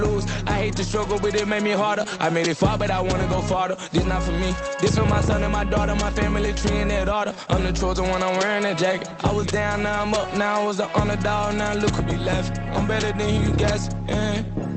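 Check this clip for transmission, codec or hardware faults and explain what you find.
Two related timing faults are present, both from a clock mismatch across the call.

Clock drift between sender and receiver runs through the whole clip. The sender's clock runs roughly 5 percent fast. The jitter buffer keeps overfilling, so timing feels faintly unsteady.

Repeated timing corrections occur from 1.06 to 4.75 s and from 7.14 to 11.87 s. The receiver trims short pieces to catch up. Playback runs at 104 percent, with slight, unevenly spaced hiccups.

The call path itself, an Opus link limited to about 8 kHz, is heard carrying the audio.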